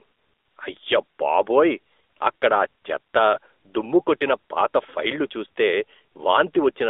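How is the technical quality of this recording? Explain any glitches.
The technical quality is limited by one fault that runs the whole length of the speech: AMR narrowband mobile codec coding. The band is confined to roughly 300 Hz to 3.6 kHz, and the codec damage is plainly audible, giving a buzzy, synthetic, telephone-like character. The codec resynthesises speech from a vocal-tract model excited by a few pulses per short subframe, which fits a mid-rate mode around 10 kbps. On a spectrogram, the energy stops sharply at both band edges with nothing above 4 kHz.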